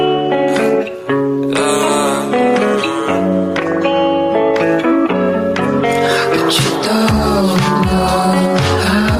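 Gain pumping runs throughout, likely from input gain set far too high with a fast limiter clamping down, so the background swells between loud sounds and ducks by around ten decibels under each.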